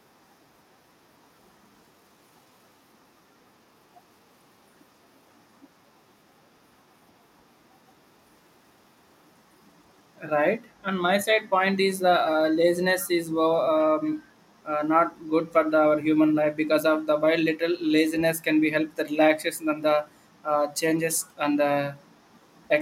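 An echo leak appears in this speech clip from 13.0 to 13.08 s: a faint, brief copy of the voice returns about 369 ms late, roughly 25 dB below the speech, likely because a far-end loudspeaker's echo canceller let part of its microphone pickup through.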